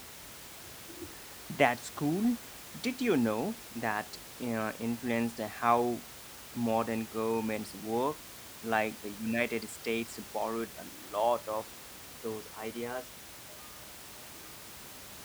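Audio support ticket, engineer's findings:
No faults found in the signal chain for this speech clip. Room noise is audible, sitting about 16 dB below the speech, and belongs to the recording environment.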